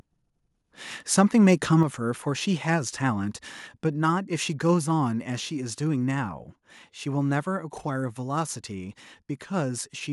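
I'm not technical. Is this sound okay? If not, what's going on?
No. At 1.18–1.21 s and 1.47–1.52 s, the loudest moments crackle harshly. That's microphone overload, likely from the input being set too high, so the peaks get chopped off. At 1.83 s the whole sound, voice and background alike, suddenly gets quieter and stays that way. That's the microphone volume stepped down, likely by the call software reacting to those peaks. It's a clean drop in loudness, not distortion.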